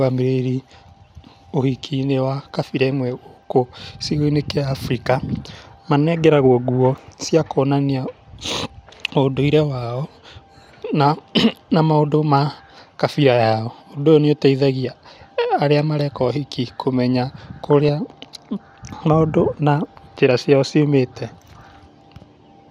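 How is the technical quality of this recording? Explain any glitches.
The speech has one audible glitch, a short burst of DAB burbling from 17.70 to 17.89 s. Residual bit errors, at a rate of around 0.2 percent, slipped past error correction and corrupted MP2 samples and scale factors, making individual sub-bands jump in level. The run spans roughly eight frames and is heard as short blips of noise in single sub-bands over the speech.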